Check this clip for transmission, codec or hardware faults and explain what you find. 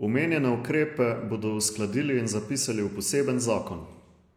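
No faults can be heard anywhere in the speech. Nothing stands out that would point to trouble along the chain from capture to playback.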